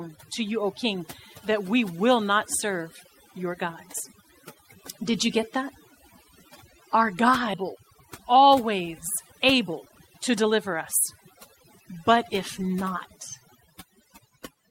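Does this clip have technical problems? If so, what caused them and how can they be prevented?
Yes. Overdone noise removal runs throughout. Aggressive noise reduction pushes frequency bands near the noise estimate nearly to silence, leaving twinkling specks. Setting reduction gentler, or recording in quieter conditions, prevents it.

A skip ahead occurs at 7.53 s. About a second of audio was discarded while later audio waited, so playback jumps forward with no gap. A larger jitter buffer and a steadier network connection prevent this.

A jitter buffer speed-up follows from 7.63 to 11.61 s. Short pitch-period pieces totalling roughly 0.4 s were cut, so the audio plays at 111% speed and sounds hurried at unchanged pitch. Reducing packet delay bursts on the network prevents it.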